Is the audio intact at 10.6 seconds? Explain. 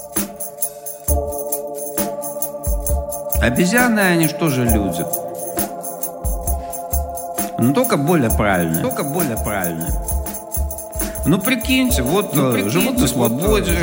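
No. A doubled audio track runs from 8.84 s to the end, so 10.6 s falls inside it. A second full-band copy trails the original by about a second, a few decibels quieter, with no decay or room colour. It likely comes from a slower capture path mixed back in.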